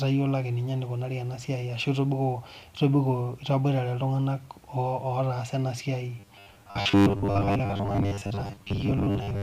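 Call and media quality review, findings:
Speech turns rigid and metallic from 6.2 s to 9.4 s, right after "otasaa ena siai", with a fixed buzz near 100 Hz. Robotic sound from repeated short buffers: likely playout underrun, a 10 ms block looped while most real audio is skipped.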